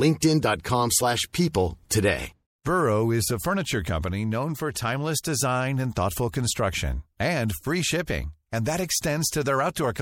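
Throughout, likely MP3 compression at a low bitrate, fitting about 64 kbps, zeroes weak detail, so the speech sounds plainly watery and swirly.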